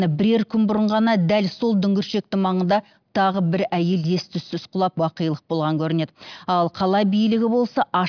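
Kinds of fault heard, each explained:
No technical faults can be heard: the signal stays continuous and steady throughout, with no breaks, level jumps or added noise.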